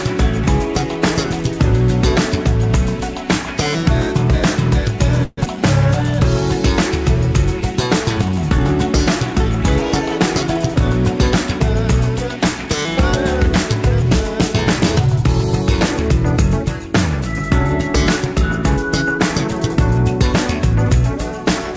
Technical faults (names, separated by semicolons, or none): call audio freeze; skip ahead; jitter buffer speed-up